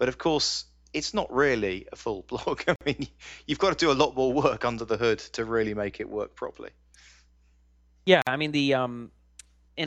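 At 2.76 s and again at 8.22 s the speech drops out for about 50 ms each, a gap at a join of encoded pieces. Separately encoded segments were butted together untrimmed, leaving encoder delay and last-frame padding as silence with smeared edges.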